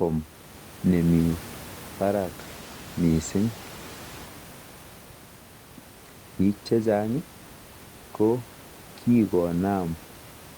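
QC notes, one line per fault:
No faults to note in this speech clip.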